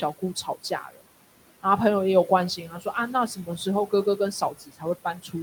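Across the whole clip, the room noise, sitting about 16 dB under the speech, drops away between phrases and swells back beneath them. These are noise suppressor artifacts: the suppressor pulls down the bands it judges to be steady noise by about 17 dB, frame by frame.

From 0.19 to 1.05 s, parts of the speech go faint and swallowed, dropping by up to about 17 dB over roughly a third of a second in total. The same happens from 2.57 to 2.94 s (about 11 dB), 4.41 to 4.84 s (about 16 dB) and 5.04 to 5.35 s (about 13 dB). This is speech cut by the noise suppressor, which mistook quieter speech for background and lowered it along with the noise.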